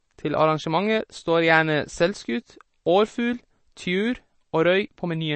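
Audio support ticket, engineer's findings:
Speech band-limited, nothing above 8.3 kHz, whole clip. Watery, swirly texture, chirpy s sounds, smeared onsets. Likely MP3 compression, bit-starved encoder. Treble cut at fixed frequency, weak spectral lines dropping in and out per frame. Damage plainly audible; fits roughly 32 kbps.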